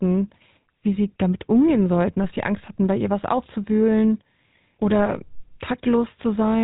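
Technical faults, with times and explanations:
Throughout: GSM full-rate codec. The speech has a plainly audible buzzy, gravelly roughness, and nothing above 3.8 kHz. The vocal tract is modelled and excited with sparse regular pulses, which discards fine detail. The sound fits a 13 kbps GSM full-rate coder.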